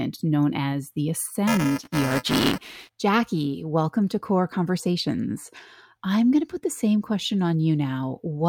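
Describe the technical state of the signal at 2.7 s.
At 2.7 s the speech is inside a stretch of buffer tearing from 1.47 to 2.95 s, starting just after "known as the". Writer and reader have slipped. Each period splices in about a tenth of audio roughly 10 ms old. The result is a robotic 375 Hz buzz, which fits a 128-sample buffer.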